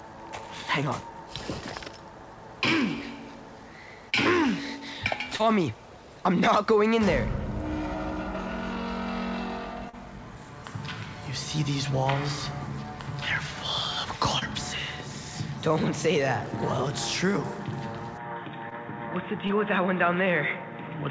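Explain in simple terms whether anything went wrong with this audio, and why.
Two things went wrong. The first is short concealed packet loss. Tiny pieces of audio, 20 to 40 ms each, arrived too late at 4.10, 5.36, 9.89, 14.39, 18.69 and 19.47 seconds. The receiver covered each gap by stretching the previous sound, so you hear a brief smear or wobble.

The second starts at 18.18 seconds and lasts to the end. The sound suddenly becomes duller and boxier, with nothing above 3.8 kHz. The likely cause is an input switched to a poorer device, such as a headset in call mode, which passes a narrower band than the call line could carry.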